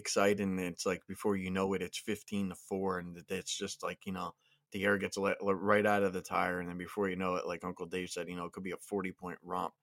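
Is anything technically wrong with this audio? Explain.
No, nothing technical stands out here; the speech recording comes across without any faults worth pointing out.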